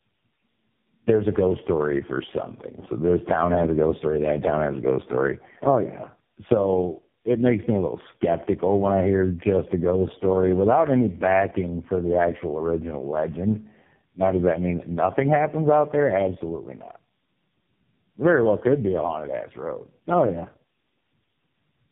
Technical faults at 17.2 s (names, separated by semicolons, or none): tandem speech coding